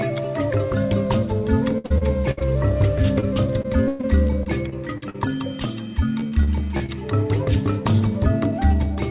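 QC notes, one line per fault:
1.78–2.42 s, 3.62–5.16 s, 6.20–6.90 s: repeated packet loss (robotic sound). These stretches turn choppy, with pieces missing. Packets kept failing to arrive, leaving holes of up to 60 ms, 112 ms and 42 ms. Each hole was patched by stretching the last sound, and the next gap came soon after.
3.20–3.24 s: short concealed packet loss. A brief smear or wobble of about 20 ms. That slice never reached the decoder in time, so the receiver continued the preceding sound across the hole and blended back into the real audio.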